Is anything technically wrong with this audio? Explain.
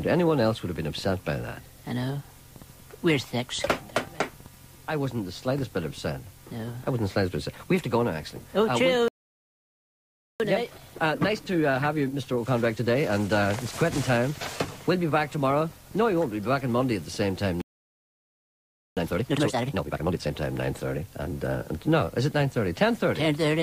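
Yes. Playback stalls at 9.08–10.40 s and 17.61–18.97 s cut the sound for about 1.3 s and 1.4 s, likely because the player's data ran out or its thread was blocked.

Time-compressed catch-up follows at 10.40–13.40 s (1.1x) and 18.97–20.31 s (2x), as the player splices out small pieces to clear its backlog, hurrying the audio at normal pitch.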